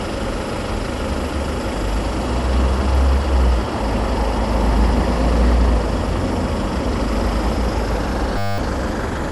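A recording of everyday sounds carries generation loss throughout: it sounds swirly, smeared and hollow, with blurred attacks and nothing above 11.9 kHz, likely from around seven passes through an MP2 codec at 96 kbit/s, each requantising on a shifted frame grid. A single encode at that rate would sound cleaner. From 8.38 to 8.58 s a system hang loop replays one 10 ms slice about twenty times, giving a steady 100 Hz buzz rather than a stutter and losing about a fifth of a second of audio. The exact repetition sets it apart from codec dropouts or noise.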